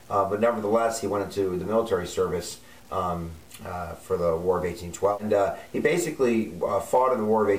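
Low bit depth without dither runs through the whole clip as a grainy distortion that moves with the sound and sits roughly 30 dB below it. The likely cause is truncation to 7 bits with no dither, so the rounding error follows the signal instead of forming steady noise.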